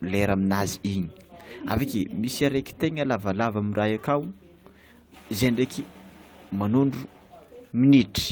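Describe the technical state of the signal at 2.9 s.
A lost packet rebuilt from error correction at 2.89 to 2.91 s, after "misy areky": the next packet's low-bitrate copy filled the 20 ms, so there's no gap, only a briefly rougher, noisier patch.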